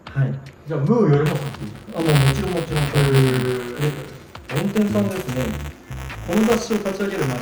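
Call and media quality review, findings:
Buffer tearing, 1.26 s to end: constant 200 Hz robotic buzz with signal; ring-buffer write/read pointers slipped, small slice of ~10 ms-old audio spliced each period. Spectrogram: harmonic lines at 200 Hz multiples; waveform: step discontinuities every 5 ms.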